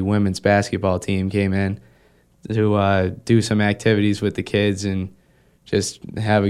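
No technical faults can be heard in this speech recording.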